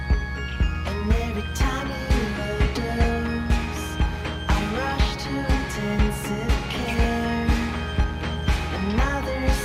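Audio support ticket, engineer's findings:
Mains buzz, present for the whole clip. Steady raspy buzz on a 60 Hz fundamental, harmonics reaching well into the kHz range, sitting only about 10 dB below the programme. Probable component: dimmer, rectifier or unshielded cable. Switching spikes twice per mains cycle couple into the audio path.

Skip ahead at 2.65 to 2.67 s. Playback jumps forward with no gap and no fill. Roughly 0.7 s of audio missing, with the two sides butted together. Probable component: network path or jitter buffer. Audio lost in transit or discarded by an overflowing buffer, cutting playout delay by around 0.7 s.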